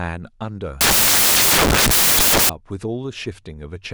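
A short speech recording is interrupted from 0.81 s to 2.49 s by samples built from the wrong bytes. Over that stretch each sample has been assembled with its bytes misaligned or in swapped order, so the rapidly varying low-order bits end up as the most significant part of the value. The result is a burst of loud, harsh broadband noise in place of the signal.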